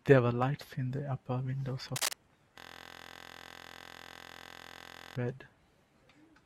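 From 1.96 to 2.13 s, a burst of scratchy, rustling noise cuts across the speech at roughly the same loudness as the voice. This is cable scratch noise, likely from a worn cable, connector or control being moved so its contact resistance jumped about erratically.

From 2.59 to 5.16 s, the speech gives way to a steady, rough buzz at 43.1 Hz. This is a system hang loop: a 23.22 ms slice of audio repeats exactly, which fits a 1024-sample buffer replaying while the computer or driver froze.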